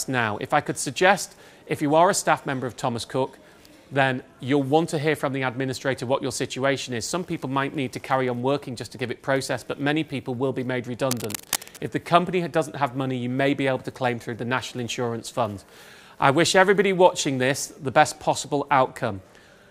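From 11.11 s to 11.90 s, a dense, uneven scratching and rustling sits over the sound for just under a second, roughly 10 dB below the main signal. This is cable scratch noise, most likely from a worn cable, connector or control being moved while recording. As the contact shifted, its resistance jumped about rapidly, and those fluctuations added ragged bursts of noise straight into the signal.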